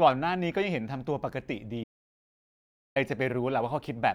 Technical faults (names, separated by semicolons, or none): audio dropout to silence